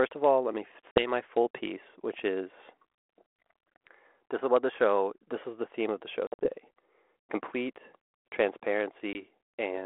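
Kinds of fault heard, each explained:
Packet loss on an ADPCM call: the speech drops into abrupt, hard-edged silent holes. One is about 50 ms just before "full piece which is", a scattered cluster totalling about 110 ms follows "theme of the show", and a brief 20 ms gap comes near the end. Each time, the sound resumes slightly distorted. The lost packets were filled with silence, so the decoder's adaptive predictor and step size drifted from the sender's and needed some tens of milliseconds to fall back into step.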